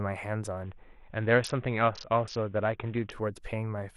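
From 0.63 to 3.12 s, a Bluetooth SBC bit pool drop starves the upper sub-bands, dulling the treble and adding gritty noise, unlike a clean low-pass, before full quality returns.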